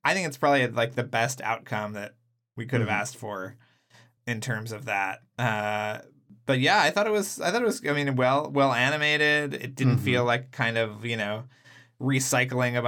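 Toward the end of the speech, from 10.19 to 11.54 s, the sound turns slightly dull and loses some air at the very top, without the obvious hollowness of a deeper phase problem. That is channel delay with comb filtering: one channel runs about a single sample late, a few hundredths of a millisecond, so when the two are summed to mono they cancel near the top of the audible range, with the first notch around 20 kHz.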